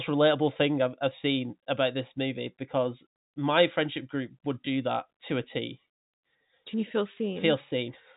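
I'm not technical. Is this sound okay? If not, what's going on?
Yes, nothing has gone wrong with this speech recording. It has the narrower sound of an ordinary landline phone call, because G.711 telephone coding leaves out the highest sounds, above about 3.8 kHz, and that is normal for a phone line.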